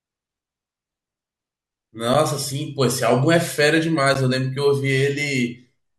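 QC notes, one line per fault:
2.14 s and 4.14 s, gap between stream segments: the time stamps of adjacent 2.0 s segments fail to meet, leaving 7.5 ms and then 10 ms uncovered, and the player fills each hole with silence. The speech drops out abruptly with hard edges on both sides, heard as a brief tick-like break recurring at the segment boundaries two seconds apart. Because the silence is inserted rather than substituted, no speech is lost; the timeline simply stretches slightly.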